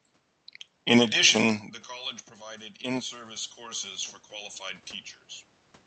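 From 2.36 s, after "addition the college", voice and room noise swell together until 3.97 s, near "for qualified". This is automatic gain rising: the input dropped by about 16 dB, and the control gradually added about 7 dB to compensate.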